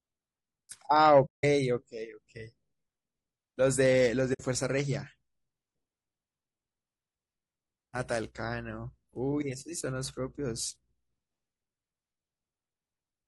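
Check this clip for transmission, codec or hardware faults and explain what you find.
Two kinds of fault are audible in this speech clip: codec roughness throughout and two brief dropouts.

Throughout, the speech sounds grainy, with noise between harmonics and a thin, synthetic top. This is likely low-delay AAC compression (AAC-ELD) at about 32 kbps, whose short frames resolve pitch poorly.

From 1.25 to 1.44 s and from 4.33 to 4.41 s, AAC frame loss with muting leaves soft-faded silences of roughly 180 ms and 60 ms.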